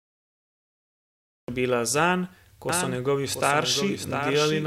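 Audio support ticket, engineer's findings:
Cut-off start: digital silence to 1.48 s, then sound kicks in mid-sound, no attack. Capture or stream opened late.

Doubled audio track from 2.69 s to the end: full-band copy trailing about 700 ms, roughly 5 dB down, dry, starts abruptly. Likely a second, slower capture path.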